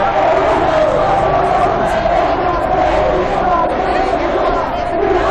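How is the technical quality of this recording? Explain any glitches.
The recording has two clear technical problems: constant distortion on loud moments, and one brief skip in the last two seconds.

Hard clipping runs through the whole clip. The louder sounds carry a gritty crackle on their peaks rather than a clean attack. The signal is driven about 7 dB past what some stage in the chain can pass, so the tops of the waveform are cut flat. Only a small share of samples actually hit that ceiling, which is why it sounds like crackle on peaks rather than fuzz on everything. The squared-off peaks add high harmonics that were never in the original sound.

Compressed frames are skipped between 3.59 and 3.73 s. Around 20 ms of audio is missing, so the sound lurches forward at the join. Whole blocks of the encoded stream were either absent or rejected by the decoder as damaged, so playback jumps ahead by a frame-sized amount.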